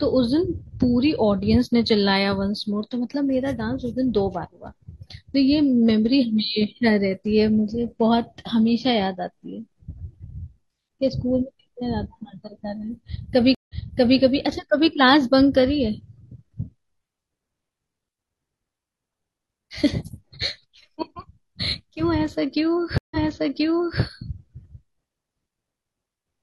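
At 13.55 s and 22.98 s, a stream reconnect: roughly 130 ms of silence, then a fresh decoder resumes 0.51 s and 0.90 s earlier, so audio repeats, fading back in.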